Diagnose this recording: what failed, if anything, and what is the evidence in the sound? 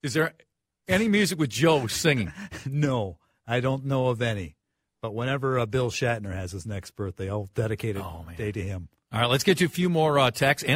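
Nothing failed here: no stage of the chain, from wiring and conversion through to playback, leaves any audible trace in this speech recording.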